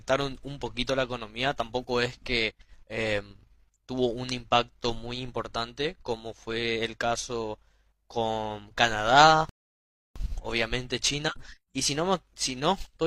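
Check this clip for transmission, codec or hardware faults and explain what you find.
One transmission fault appears. A rebuffering stall at 9.49–10.16 s: playback starves, falls silent for 0.66 s, then resumes exactly where it stopped without loss, unlike a dropout, which skips audio.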